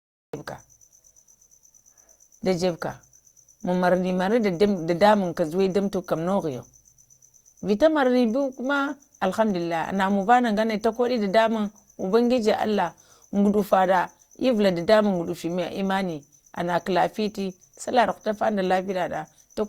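From the first instant until about 0.34 s there is nothing but digital silence, and then the speech appears abruptly, already partway through a sound, with no natural onset or fade-in. This is a cut-off start: the recording or stream began capturing late, so the opening of that sound was never captured. The audio jumps from silence to an in-progress sound rather than rising into it.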